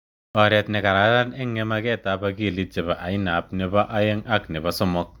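From 0.0 to 0.35 s the clip holds digital silence, then jumps straight into speech mid-sound at 0.35 s, just before "oret ne kararan ing". This cut-off start shows capture began late, so the opening has no natural attack or fade-in.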